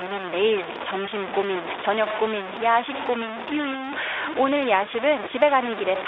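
Speech runs over a narrow phone-style band that sounds like Speex at a decent setting, and the whole thing is coated in grainy, signal-following distortion, with the error only roughly ten decibels below the speech. Quiet stretches go gritty or sputter out. That's most likely low bit depth without dither, truncated down to something like 4 bits. There are also two short dropouts, around 1.05 to 1.09 s and 4.85 to 4.89 s. Each is one 20 ms gap that the speech codec's packet loss concealment patches with a stretched, fading fill. The voice then comes back weak and smeared for a beat until the decoder recovers.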